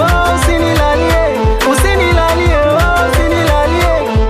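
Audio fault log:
No faults heard anywhere in this clip.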